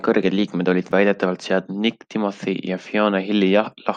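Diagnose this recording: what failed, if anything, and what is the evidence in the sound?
A repeated buffer at the driver or buffer stage causes a click at 0.91 s, between "kõrged liikmed olid" and "väidetavalt seadnud". New audio missed its deadline, so the last block of about 5 ms, which fits a 256-sample buffer, played twice with a hard join.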